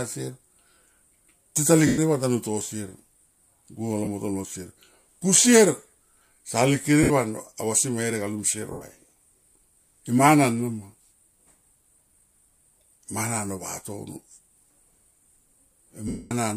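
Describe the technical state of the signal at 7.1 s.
Right at 7.1 s there's a short dropout from lost LE Audio frames, running from 7.03 to 7.11 s, about 70 ms, which fits roughly seven 10 ms frames. The decoder papers over the gap by replaying the last spectrum with scrambled signs, so the speech turns into a brief noisy smear that starts fading toward the end. The underlying stream is likely LC3-coded Bluetooth audio.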